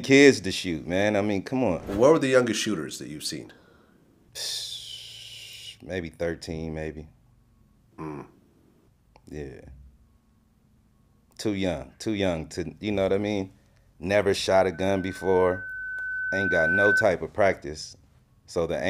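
At 14.74 s a loudspeaker feedback squeal begins: a pure tone near 1.5 kHz swells over roughly two seconds until it sits around 5 dB above the surrounding sound, then stops at 17.04 s. The microphone was picking up its own loudspeaker, and at that frequency the loop gain passed unity, so the tone fed on itself. A spectrogram shows a single bright horizontal line at 1.5 kHz thickening as it grows, and the waveform's envelope rises steadily across that span.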